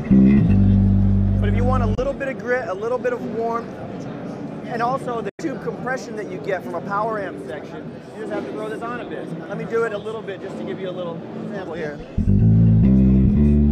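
Packets were likely arriving too late at the Bluetooth headphones and being discarded, a Bluetooth dropout. The sound cuts to silence from 1.95 to 1.99 s, losing about 23 ms, and from 5.29 to 5.41 s, losing about 93 ms. Each time it resumes further along, as if it had kept playing.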